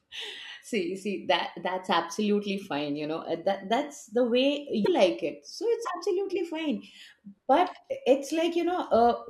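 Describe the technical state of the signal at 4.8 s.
At 4.81 to 4.88 s the speech hits damaged data in the compressed stream. The decoder misreads the corrupted frames and loses sync, producing a brief chirp, squawk, click or short hole.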